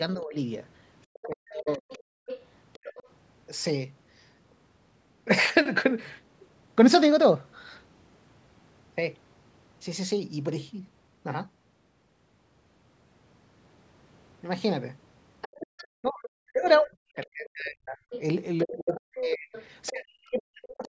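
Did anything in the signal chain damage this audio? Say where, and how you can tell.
Yes. The call's echo canceller likely mistook overlapping talk for echo. Speech suppressed in double talk dips about 20 dB at 0.15–0.35 s, and about 40 dB at 1.27–1.88 s and from 16.01 s to the end.

Residual echo likely lets the other side's voice leak through, faint, about 20 dB down at 1.14–3.09 s and about 15 dB down at 15.41–19.89 s.

The canceller gated the background, clamping the microphone about 40 dB for roughly 0.1 s at 2.16–2.27 s, so the room tone briefly vanishes.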